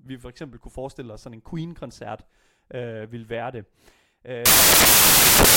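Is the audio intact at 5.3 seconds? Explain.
No. At 5.3 seconds the speech sits inside a stretch of samples built from the wrong bytes, running from 4.46 s to the end of the clip. Each sample's bytes are misassembled, so the rapidly changing low-order bits dominate, producing loud, harsh broadband noise.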